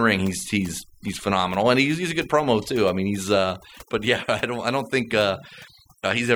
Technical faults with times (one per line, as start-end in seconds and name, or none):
0.00-6.35 overdone noise removal